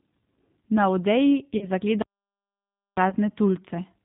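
Across the whole clip the speech sounds narrow, slightly rough and synthetic, with no content above 4 kHz. This is plainly audible G.729 codec damage. At 8 kbit/s the codec rebuilds the voice from a vocal tract filter, a pitch predictor and a few pulses per frame rather than sending the waveform.

From 1.57 to 1.69 s the voice smears into a buzzy tone or coloured noise that fades, and stays weak briefly afterwards. This is VoIP packet loss concealed by the speech codec: about 40 ms of audio went missing, which fits two lost packets. The decoder extrapolated from its last pitch and filter with falling gain.

At 2.02 s the sound cuts off abruptly into total silence, with no room tone. It resumes mid-flow at 2.97 s, so roughly 0.95 s is gone. This audio dropout to silence was likely caused by the input being lost while silence kept being written.

From 3.10 to 3.15 s a shorter concealment glitch briefly blurs the speech into a buzzy or noisy smear. 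This is the same VoIP packet loss concealed by the speech codec, covering about 20 ms, which fits a single lost packet.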